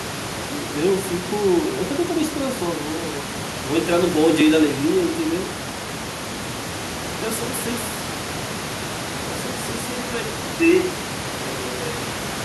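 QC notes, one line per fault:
10.27–12.44 s, input switched to a poorer device: the input likely changed without a gap to a device passing a narrower band, so the speech turns dull and boxy at much the same level over faint new background noise.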